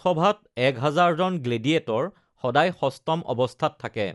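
Right through the speech there's plainly audible codec damage, most likely Dolby Digital compression at a low bitrate, something like 64 kbps. Nothing survives above 11.5 kHz, so it sounds dull, and starved frequency lines filled with noise leave a rough, fluttering haze around tones.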